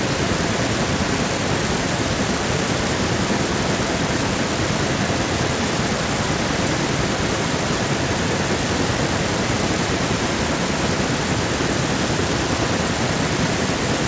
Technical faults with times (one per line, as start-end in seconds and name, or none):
0.00-14.07 echo with no canceller